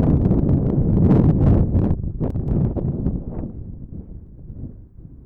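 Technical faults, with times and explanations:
2.30–2.48 s, one channel drops out: the level falls abruptly by about 6 dB and snaps back, likely one stereo side lost before mono summing, unlike a gradual gain dip.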